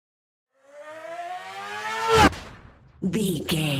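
From 2.37 s to the end, a call bitrate drop from 48 to 17 kbps leaves coarse, muffled sound for 1.3 s, without the gaps that packet loss causes.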